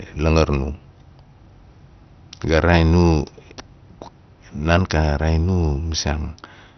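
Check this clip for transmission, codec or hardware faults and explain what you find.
One codec fault runs through the whole clip. It sounds like heavy MP2 compression, likely from a low bitrate, near 48 kbps. Layer II starves its 32 sub-bands of bits, so everything above about 6.1 kHz is gone. The remaining bands are coarsely quantised. The speech sounds dull, with a gurgling, granular roughness.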